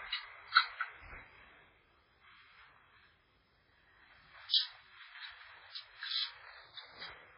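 Throughout, a very low bitrate, most likely heavy MP3 compression at around 16 kbps, leaves nothing above 5.3 kHz and makes the remaining sound watery and swirly. From 4.49 to 4.54 s there is pre-echo: the codec's quantisation noise spreads about 46 ms ahead of a sharp attack, adding a brief hiss and softening the hit.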